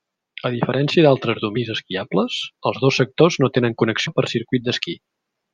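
Damaged data in a compressed stream hits this speech clip at 4.07 s, right after "dos sectors no tenen", as a brief disruption. Corrupted bytes there make the decoder misread the frame, lose sync and hunt for the next valid frame header.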